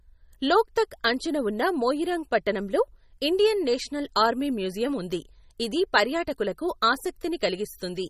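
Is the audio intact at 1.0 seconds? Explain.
No, at 1.0 seconds the speech carries MP3 compression damage that runs through the whole clip: likely a starved encoder, fitting roughly 32 kbps, zeroing weak detail into a watery swirl, with nothing above 15.2 kHz.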